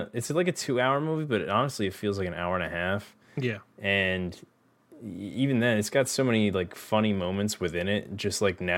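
Nothing stood out on listening to this speech recording.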